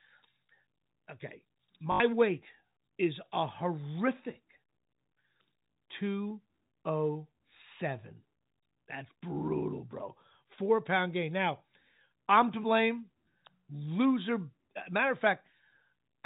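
Packet loss with the last packet repeated occurs at 1.92 to 2.00 s and again at 5.72 s. In the first, about 80 ms of audio went missing just before "weight is a horrific", and the receiver kept replaying the last packet it had. The repeats don't align with the pitch, and the run buzzes at a 50 Hz rate, which fits four 20 ms packets. The second, just before "two oh seven", is a single 20 ms repeat, a small blip within the telephone-band G.711 sound.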